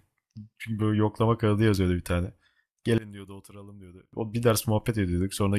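From 2.98 to 4.13 s the speech drops by about 22 dB to a faint copy. One channel inverted is the likely cause: reversed polarity cancels the shared centre when summed to mono. Unlike a dropout, a faint residue persists.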